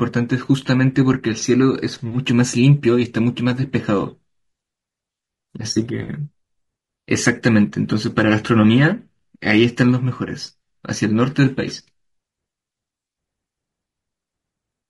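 Throughout the speech, the voice has a rough, grainy texture, with a hiss-like noise filling the gaps between harmonics and a top band that sounds thin and synthetic. This is likely low-delay AAC compression, as with AAC-ELD in video calls. Its short frames cannot separate closely spaced pitch harmonics well, so at a modest rate, plausibly around 32 kbps, the encoder runs short of bits and the damage is plainly audible.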